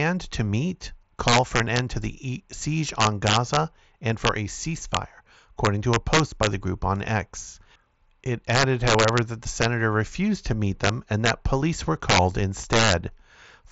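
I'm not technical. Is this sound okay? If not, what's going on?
No. Integer overflow runs through the whole recording: on the loudest moments of the speech you hear sudden, harsh cracks. The level was pushed higher than the digital system can count, and instead of being capped at the maximum, those peaks wrapped around to the opposite extreme. Only a tiny fraction of the sound goes over, but each of those moments snaps violently, much sharper than ordinary distortion. The audio also passes through a Bluetooth mSBC headset codec, which limits how crisp it can sound.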